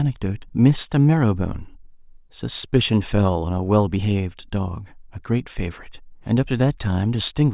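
No technical faults heard.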